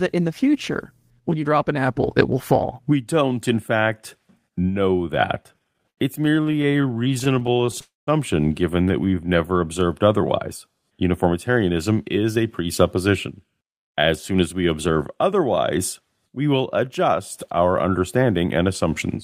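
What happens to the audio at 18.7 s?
Right after "we will adjust our", from 18.36 to 18.85 s, the audio goes through a jitter buffer speed-up. The receiver, holding more audio than it wanted, trimmed short pitch-period-sized pieces in quick succession, removing around 50 ms in total. That stretch plays at about 109% speed and sounds briefly hurried. Unlike a sped-up playback rate, the pitch stays the same, and unlike a dropout, there is no gap or click.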